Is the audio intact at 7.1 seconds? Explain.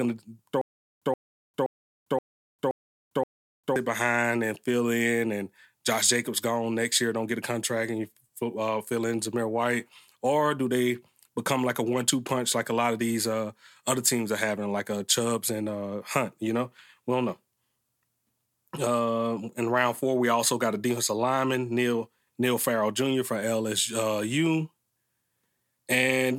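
Yes, the speech is intact at 7.1 seconds, with no dropout, click, distortion or other fault at that moment.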